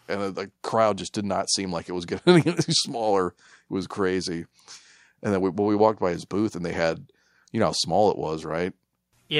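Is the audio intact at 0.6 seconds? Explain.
Yes, the speech at 0.6 seconds plays through cleanly, with no dropout, click, distortion or other fault at that moment.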